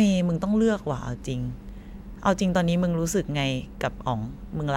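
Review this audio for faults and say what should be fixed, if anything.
Video or display buzz runs from 1.22 s to the end of the speech, about 40 dB down: a 59.94 Hz field-rate buzz with hash, plus a 15.7 kHz line-rate whine. Unlike mains hum, it sits at the picture rate and carries that line tone. Reroute audio away from video cables and screens, and ground the gear to a common point.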